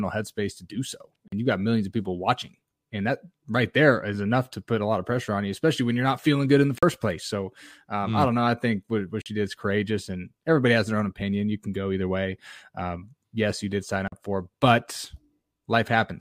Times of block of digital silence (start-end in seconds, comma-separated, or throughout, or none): 1.28-1.32, 6.78-6.83, 9.22-9.26, 14.08-14.12